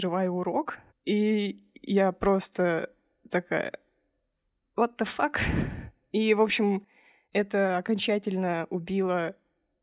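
No technical faults occur at any point in the speech, so there are none to describe in time order.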